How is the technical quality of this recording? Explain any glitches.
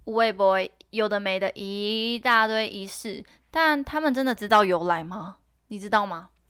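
Nothing in the recording stood out as a technical problem on listening, so there are no glitches to explain.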